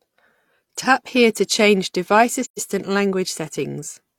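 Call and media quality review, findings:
Soft-edged dropout in the speech, 2.44–2.59 s: level fades to silence and back, a smooth hole of roughly 0.16 s. Likely component: AAC decoder. Mechanism: AAC frame loss with muting. Lost frames' spectra zeroed, about 128 ms of audio missing (consistent with three frames), and the overlapping transform windows taper the surrounding audio into and out of the gap.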